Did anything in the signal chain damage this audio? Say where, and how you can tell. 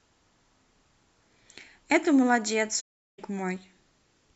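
Yes. AAC frame loss with muting at the codec, 2.80 to 3.19 s: the decoder zeroed missing frames, leaving a soft-edged 0.38 s gap in the speech.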